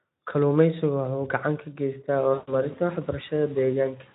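Speech, with VoIP packet loss concealed by the speech codec from 2.33 to 2.53 s, just after "uu gacan ka geystaa". Roughly 140 ms of audio went missing, which fits about seven 20 ms frames. The decoder kept extrapolating its last pitch and filter at steadily falling gain, so the sound smears into a fading buzzy tone or coloured noise and stays weak for a moment after packets resume. A plain dropout would instead cut abruptly to silence.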